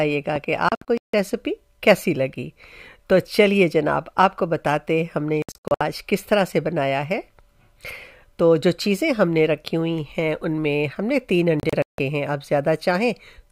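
Right at the start, between 0.36 and 0.38 s, there's a single loud pop, a sharp click sitting roughly 10 dB above the sound, which carries straight on underneath it. It's a short voltage spike riding on top of the signal, likely from something like a plug, switch or static discharge, with the downstream circuitry shaping it into that quick thump.

Then come three digital broadcast dropouts, where the receiver lost good frames and muted until clean ones arrived. From 0.69 to 1.14 s the audio breaks into short silent holes, about 288 ms gone across 448 ms, the longest gap 160 ms. At 5.42 to 5.81 s it's choppier, about 256 ms lost over 384 ms but no hole longer than 64 ms. Finally, 11.60 to 11.99 s loses about 224 ms over 384 ms, with one 160 ms gap. The gaps come in 32 ms steps, which points to a 32 ms frame.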